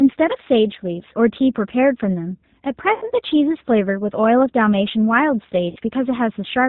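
Throughout, the speech sounds band-limited, rough and slightly synthetic, with plainly audible G.729 codec damage: an 8 kbit/s coder rebuilds everything below 4 kHz from a filter, pitch and sparse pulses. From 2.94 to 3.10 s and again from 5.70 to 5.79 s, the voice smears into a fading, stretched sound before recovering weakly. This is VoIP packet loss concealed by the speech codec, with the decoder extrapolating across gaps of about 80 ms and 60 ms.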